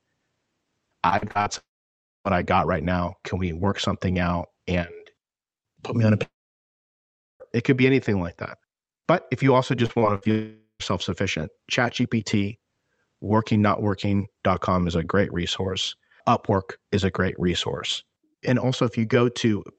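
Speech recorded over a call path with a bandwidth near 8 kHz suffers repeated packet loss at 1.09–1.48 s and at 9.86–10.27 s, after "if you also". In each stretch five gaps, the longest 48 ms and 62 ms, were patched by continuing the previous sound, leaving choppy, robotic fragments. Three silences point to a likely long network dropout, at 1.58–2.27 s (just before "I got right now"), at 6.23–7.42 s (after "put me on a"), and at 10.31–10.82 s. In each, a fading buzz or hiss gives way to silence, about 0.6 s and 1.1 s in the first two and only briefly in the third, and the lost audio never returns.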